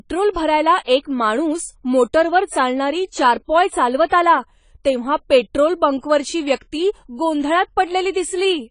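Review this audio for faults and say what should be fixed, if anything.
AAC compression, audible throughout the clip, is the likely cause of the dull, smeared quality of this speech. Nothing is present above 10 kHz, and the damage is plainly audible: the encoder has discarded high-frequency detail and coarsely quantised what remains, leaving a swirly texture on sustained sounds and sibilants. That combination fits a low bitrate of around 24 kbps with AAC-LC. To prevent it, keep the master in a lossless format and encode any delivery copy at a substantially higher bitrate.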